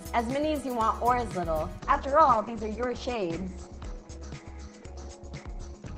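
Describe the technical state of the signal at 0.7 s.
The signal at 0.7 s is intact, with no fault present at that moment.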